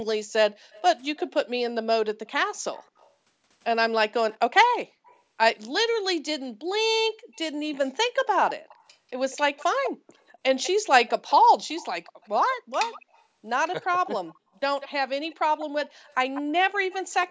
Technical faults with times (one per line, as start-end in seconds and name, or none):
0.71-1.29 echo leak
2.82-3.11 echo leak
4.30-5.20 echo leak
6.63-7.34 background gated by the echo canceller
7.34-17.14 echo leak
13.80-13.88 background gated by the echo canceller